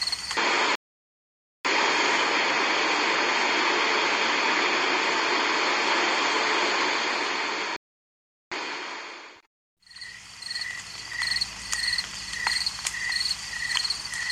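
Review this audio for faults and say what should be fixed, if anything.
The sound drops to silence at 0.75 s for about 0.89 s and again at 7.76 s for about 0.75 s before resuming. These are playback stalls, likely from the player's buffer running dry or its thread being blocked. A deeper playback buffer and a high-priority audio thread would prevent them.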